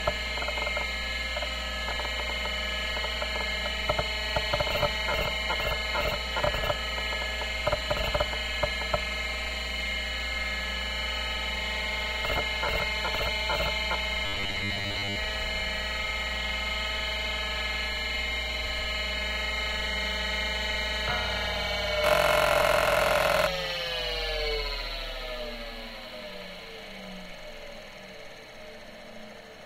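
From 14.26 to 15.16 s the sound collapses into a rigid, metallic buzz at 100 Hz, robotic sound from repeated short buffers. This likely comes from audio arriving too seldom, so a 10 ms stretch keeps repeating while most of the real sound is skipped.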